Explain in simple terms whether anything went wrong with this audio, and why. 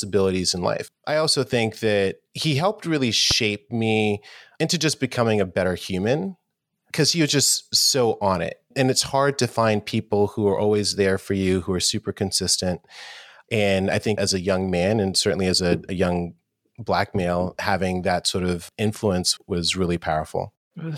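There's one loud pop at about 3.31 to 3.33 s, right after "that he helped really" and before "me into just becoming". It's a single sharp crack, well above the speech, which carries on underneath. The likely cause is a brief electrical jolt, like static or a plug or switch.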